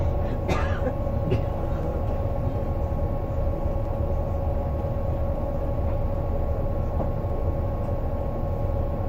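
Dropped samples at 1.83, 3.85, 5.36 and 7.30 s put four isolated, sharp clicks into this recording of sounds. Each is likely caused by a tiny run of samples, a fraction of a millisecond's worth, going missing from the stream. The waveform then leaps straight from one value to a later one. That step discontinuity is far too brief to remove any audible sound. It is heard only as a single tick and shows as a thin vertical line across the spectrum.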